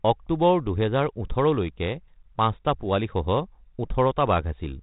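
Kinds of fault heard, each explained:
No faults can be heard; the speech runs through a G.726 ADPCM path at 32 kbit/s as intended, its bandwidth ends at 4 kHz and the coding leaves only light damage.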